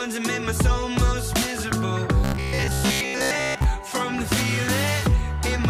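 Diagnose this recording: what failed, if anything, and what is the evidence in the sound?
Robotic sound from repeated short buffers, 2.24 to 3.65 s: a rigid 66.7 Hz buzz, likely driver-buffer underruns looping 15 ms chunks, not silent dropout gaps.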